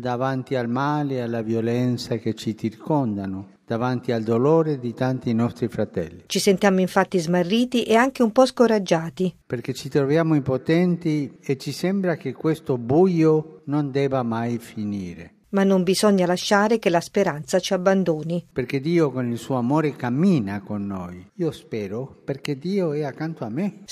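No technical faults can be heard anywhere in the recording; the signal holds steady and continuous throughout.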